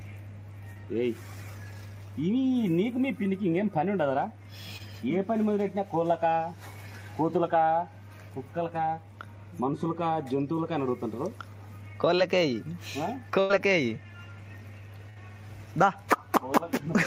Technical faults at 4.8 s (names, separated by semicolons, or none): short concealed packet loss